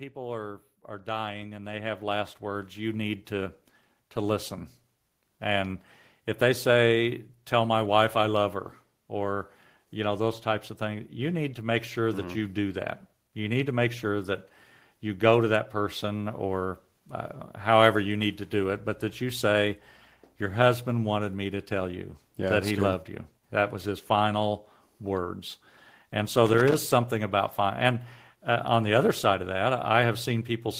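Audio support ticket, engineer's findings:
Automatic gain rising. AGC judged input too quiet and ramped gain up slowly. Speech and background swell together: about 15 dB over 0.13–5.86 s, ending just before "if they say"; about 3 dB over 9.27–16.45 s, after "wife I love her".

Loose connector crackle. Worn or dirty contact making and breaking intermittently, chopping the signal and popping with any line DC. Irregular burst of crackle 26.46–26.74 s, just before "something about". Check cable and jack.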